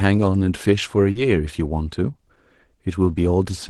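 Speech clip, sent over a call link, with a short concealed packet loss around 1.11 to 1.18 s: about 40 ms never arrived, so the decoder extended the previous sound and blended back, leaving a quick smear. The band tops out near 12 kHz, which fits a super-wideband Opus setting.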